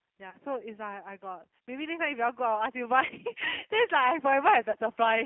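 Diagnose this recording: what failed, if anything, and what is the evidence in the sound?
Codec stage: G.729 coding throughout. The band stops near 150 Hz and 3.4 kHz, and the speech is plainly rough and synthetic, consistent with an 8 kbit/s pulse-excited coder.

Network stage: VoIP packet loss concealed by the speech codec at 0.30–0.37, 3.06–3.13 and 4.71–4.76 s. About 30 ms of audio is missing each time, and the decoder's extrapolation turns buzzy or noisy and decays before recovering.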